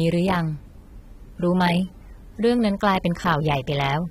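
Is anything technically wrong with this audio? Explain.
Yes. Throughout the speech, the sound is dull and smeared, with plainly audible damage and nothing above 16.6 kHz. This is likely AAC compression, which fits AAC-LC at a low bitrate around 32 kbps: the encoder cuts high frequencies and coarsely quantises the rest against a hearing model.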